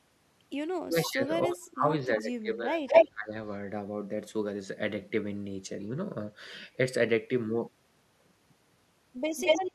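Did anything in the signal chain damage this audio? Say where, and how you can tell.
Yes. Between 0.84 and 3.34 s the speech keeps dipping, by up to about 25 dB at its deepest, for around two seconds in total. This is speech suppressed in double talk, in the call processing stage. The echo canceller likely mistook both sides talking at once for echo and attenuated the near talker. Unlike a network dropout, the level sinks and recovers in pieces instead of cutting to silence with glitchy edges.

A delayed copy of the speech also surfaces at 1.07, 2.87, 5.8 and 9.37 s. This is echo leak, also from call processing, and likely comes from a loudspeaker-side echo canceller letting residual echo through. The lag is 278 ms at the first event and 224 ms afterwards. The level varies widely, from about 40 dB below the speech to about 10 dB above it. That discrete delay repeating the talker rules out room reverberation, which would decay smoothly with no discrete lag.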